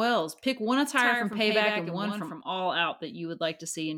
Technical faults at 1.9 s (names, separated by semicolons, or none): doubled audio track